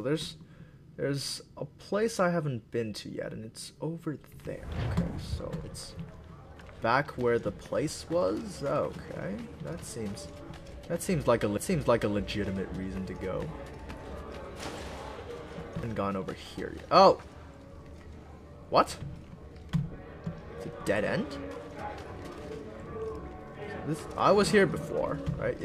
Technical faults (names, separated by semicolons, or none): CD skip